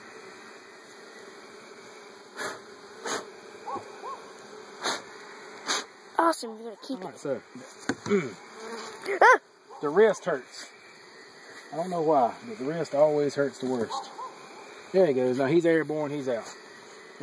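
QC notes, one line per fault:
No faults found in this clip.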